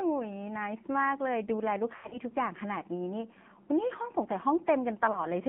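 Throughout, the speech sounds thin, buzzy and synthetic, confined to roughly 150 Hz to 3.4 kHz. This is the AMR narrowband mobile codec. Its vocal-tract model and sparse pulses, at a low mode that fits about 7.4 kbps, leave plainly audible damage.

From 1.96 to 2.19 s the sound warbles, smears and briefly sags toward silence, then returns rough. These are lost AMR speech frames, fitting about six dropped frames. Totalling 120 ms, they are scattered over 160 ms with a longest run of 80 ms. The decoder stretched the last good settings while fading the gain. At 5.12 s a single 20 ms loss causes a short dip.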